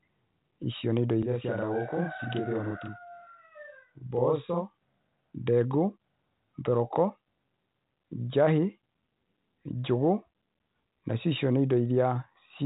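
From 1.23 to 4.88 s the speech sounds doubled, a second copy trailing 40 ms behind at equal level: channel delay (doubling), one channel buffered late before the mono sum.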